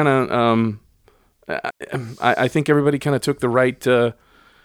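A short speech recording with one digital wireless dropout, from 1.70 to 1.81 s, just before "I I think everybody". For about 105 ms the signal falls to near silence: the receiver lost too much data from the link and muted itself with a very quick fade. It reads as a clean hole with no hiss, static or crackle at either edge, which separates it from an analogue radio dropout, where the gap is filled or bordered by a noise burst.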